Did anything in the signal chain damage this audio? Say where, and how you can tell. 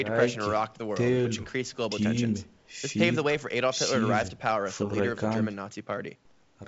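No, nothing in this speech stood out on listening as damage from any stage of the signal chain.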